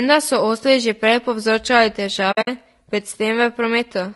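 Throughout, the speech sounds rough and grainy, with noise between harmonics. This is likely low-delay AAC compression, which fits AAC-ELD at about 32 kbps. From 2.31 to 2.48 s, AAC frame loss with muting opens soft-edged gaps. They total about 120 ms over roughly 160 ms, the longest near 70 ms.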